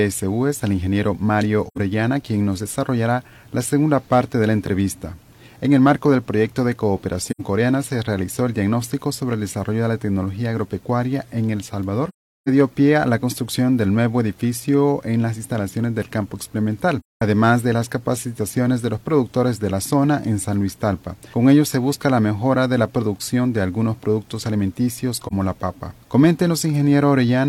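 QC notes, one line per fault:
1.67–1.78 s, 7.28–7.41 s, 12.09–12.49 s, 17.00–17.22 s, 25.27–25.33 s: AAC frame loss with muting. Missing frames were decoded as silent spectra, so overlapping windows fade the sound out and back in, leaving soft-edged holes. The losses are 85, 85, 384, 213 and 43 ms, consistent with 42.7 ms frames.
4.66 s: underrun with held sample. The output buffer ran dry for about 10 ms and the converter held its last value, flattening the waveform. About 10 ms of audio was lost meanwhile.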